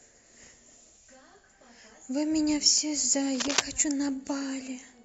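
From 3.35 to 3.60 s, roughly a quarter of a second of cable scratch noise rides over the speech, about as loud as the voice itself. It is a dense, uneven scratching rustle, most likely from a worn cable or connector shifting so its contact resistance fluctuated rapidly. Unlike a single click or pop, it is a cluster of irregular bursts spread over the whole interval, and the speech continues underneath rather than dropping out.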